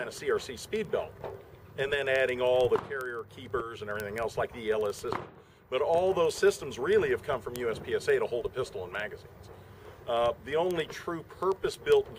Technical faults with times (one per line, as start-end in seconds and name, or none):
0.13-12.15 word clock ticks